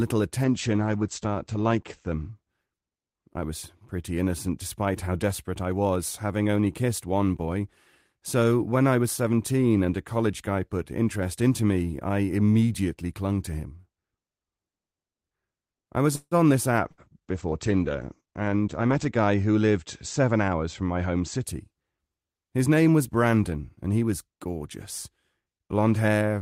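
A falling bandwidth estimate twice forced a call bitrate drop in this speech recording, with the encoder pushed from 32 kbps down to 12 kbps. The first runs from 0.45 to 3.01 s, just before "I was pretty innocent," bottoming out for about 1.2 s. The second spans 16.86 to 21.50 s, at its lowest for about 2.4 s. Both times the coarser coding roughens the sound, and the audio band shrinks from 20 kHz to 8 kHz, muffling the top end. Right after "I was," at 16.15 to 16.34 s, a call audio freeze likely came from delayed packets draining the jitter buffer. The last sound is stretched into a fading buzz or hiss for about 160 ms, ending in roughly 40 ms of silence. Playback then picks up where it stopped, so nothing is lost but a gap is inserted. A burst of packet loss follows at 16.91 to 17.01 s. About 60 ms of audio never arrived, and the concealment fills the hole with a decaying continuation, so the sound jumps ahead past the missing part. 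From 18.21 to 19.36 s a jitter buffer speed-up trims the excess delay by cutting short pitch-period slices, around 150 ms in all. Delivery runs at about 113% speed and sounds hurried, though the pitch stays the same.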